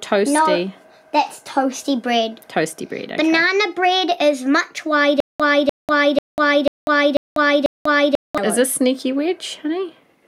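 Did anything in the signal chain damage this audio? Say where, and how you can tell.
Yes. A stutter with silent gaps runs from 5.20 to 8.38 s. The same 298 ms fragment repeats six times, each followed by 194 ms of digital silence, a steady 492 ms cycle. This likely comes from a playback or streaming stall, replaying its last buffer on each retry.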